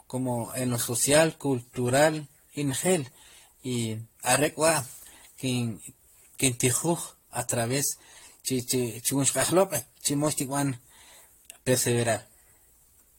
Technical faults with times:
0.00-13.19 generation loss

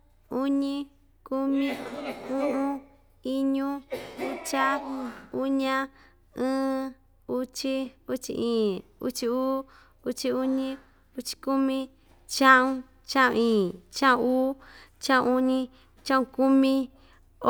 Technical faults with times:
none

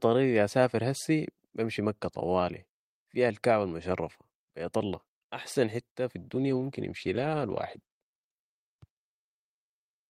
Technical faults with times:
6.18-9.11 call bitrate drop

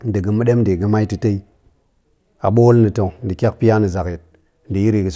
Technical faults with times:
none

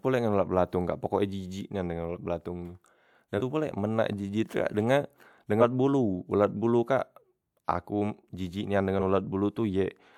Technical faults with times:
3.37-3.41 compressed frames skipped
5.60-5.63 compressed frames skipped
8.99 compressed frames skipped

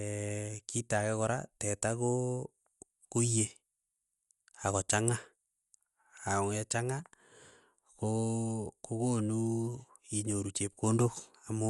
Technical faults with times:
0.00-11.70 Dolby Digital compression

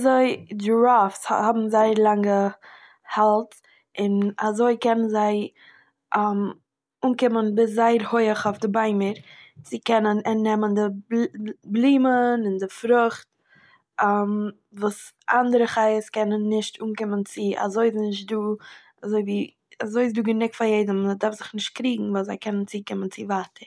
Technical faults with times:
none

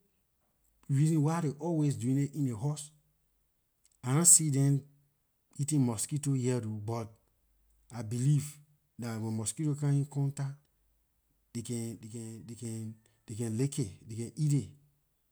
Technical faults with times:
12.01-12.65 sudden gain jump

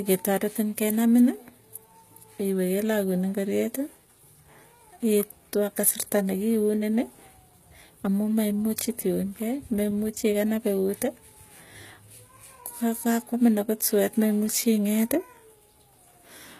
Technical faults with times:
0.00-16.59 HE-AAC compression

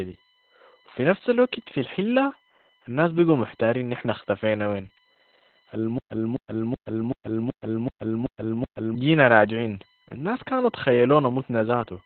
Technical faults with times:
0.00-12.06 USB whine
0.00-12.06 Opus voice compression
5.98-8.95 stutter with silent gaps

